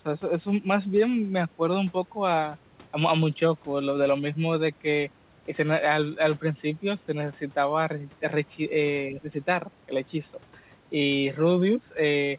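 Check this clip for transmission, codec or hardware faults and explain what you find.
One fault stands out, and it is short. The audio is band-limited to 4 kHz, which fits a narrowband telephone codec such as G.711, but that is expected for this kind of call path rather than a fault.

From 9.11 to 9.29 s, the speech briefly sinks by roughly 10 dB for about a fifth of a second. This is likely speech suppressed in double talk: with both ends talking, the echo canceller mistook the near talker for loudspeaker echo and attenuated it.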